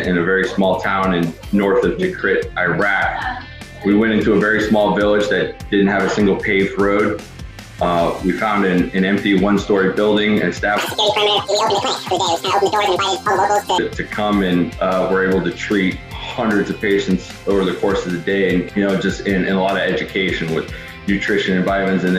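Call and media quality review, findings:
Audio read two samples at a time (double speed), 10.78 to 13.78 s: playback at 2x and an octave (12 semitones) high. Probable component is the reader or decoder treating sample pairs as single frames, as if stereo or double-width.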